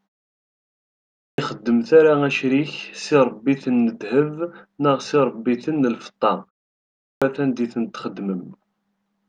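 The output device drops into a low-power state during silence and does not wake fast enough when sound resumes, a clipped start after a pause. At 0.99 s, after a pause of about 1 s, the first 0.39 s of speech is lost, so it begins abruptly mid-sound. At 6.78 s, after a pause of only 0.36 s, 0.44 s is swallowed before the audio returns at 7.22 s. The pauses themselves simply fall silent.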